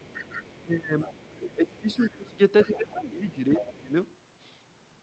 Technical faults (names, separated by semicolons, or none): other side's voice leaking through; speech suppressed in double talk